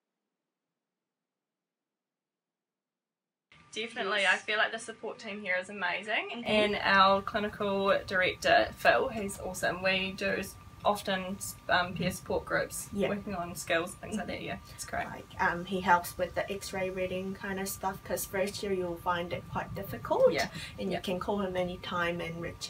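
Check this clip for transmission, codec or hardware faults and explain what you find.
One fault, right at the start. From 0.0 to 6.46 s the sound is duller, cut off above about 10.4 kHz, a bit quieter, with its own faint noise floor. That's likely an input switched to a poorer device, with the clip snapping back to the fuller input at 6.46 s without any gap.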